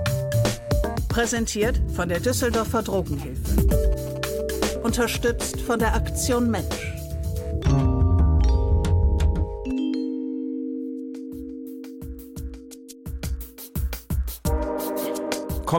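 From 2.51 to 4.64 s, GSM signalling bursts break in as a galloping dit-dit-dit of short buzzes, roughly 20 dB below the main sound. A nearby 2G phone is exchanging brief signalling transmissions, and the audio circuitry rectifies the radio energy into a buzz pulsing at 217 Hz. Unlike steady mains hum at 50 or 60 Hz, this arrives in short, rhythmic clusters that start and stop abruptly.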